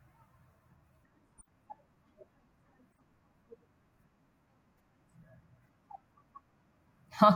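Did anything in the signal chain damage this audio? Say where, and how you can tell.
Yes: corrupt frame decoded at 1.38–1.47 s and 2.91–2.99 s, a codec fault. Damaged frames were played anyway, leaving brief, faint blips of misplaced noise.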